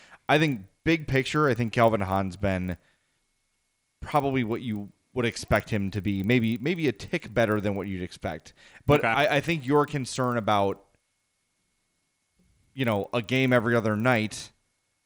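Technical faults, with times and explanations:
Throughout: resampler restarted on every block. The speech carries a rough buzz at 25 Hz, and it stops in the pauses. The conversion looks like a doubling, which fits 24 kHz audio raised to 48 kHz. Each 40 ms block was converted in isolation. At every block edge the converter had no true neighbouring samples to draw on, so each edge carries a small error. Those errors repeat twenty-five times a second and fuse into a buzz wherever the speech has energy.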